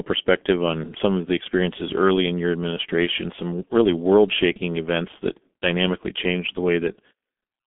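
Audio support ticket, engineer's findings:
G.723.1 codec, throughout: speech passed through a telephone-band path and a low-rate G.723.1 encoder, consistent with about 6.3 kbit/s. Band limited to 200 Hz–3.4 kHz, nothing above 3.6 kHz. Slow 30 ms frame model gives heavy damage: muffled, hoarse tone, blurred consonants.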